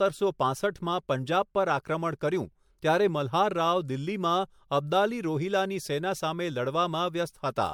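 Speech with generation loss throughout. It sounds swirly, hollow and smeared, and attacks blur. Likely cause: repeated MP3 re-encoding, about four passes, at what sounds like 96 kbit/s.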